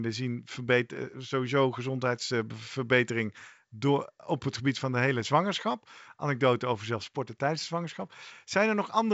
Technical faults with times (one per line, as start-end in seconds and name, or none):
none